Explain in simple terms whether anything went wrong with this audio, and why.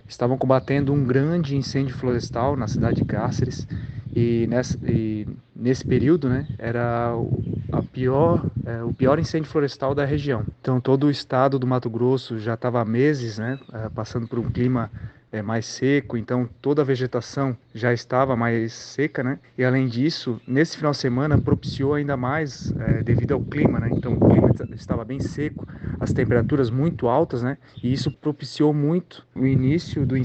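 Nothing went wrong here: listening closely turns up no dropouts, clicks, distortion or other audible problems anywhere in the clip.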